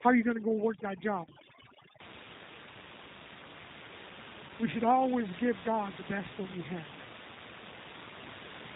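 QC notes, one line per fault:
Throughout: G.729 codec. The speech is carried at 8 kbit/s by a coder that resynthesises it from a vocal tract filter, a pitch predictor and a sparse set of pulses per 10 ms frame, so the waveform itself is never transmitted. Nothing above 4 kHz survives, which dulls sibilants and airiness, and the damage is plainly audible as a rough, slightly synthetic edge on every syllable, with the room noise, sitting about 10 dB below the speech, turned into a warble.
0.0 to 2.0 s: overdone noise removal. For the first two seconds a noise reducer is clamping down far too hard, switching off individual frequency bands whenever they fall close to its noise estimate. The background drops and breaks up into twinkling specks, and the quieter, weaker components of the speech are cut along with the noise, until the processing eases after 2 s.
1.25 s and 4.47 s: VoIP packet loss concealed by the speech codec. 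At each point about 20 ms of audio goes missing, which fits one lost packet each time, and the decoder bridges the gap by extending its last pitch and filter state with falling gain. That produces a brief buzzy or noisy stretch that fades instead of a silent hole, and because each frame is built on the previous one, the speech stays weak or distorted for a short while after the packets resume.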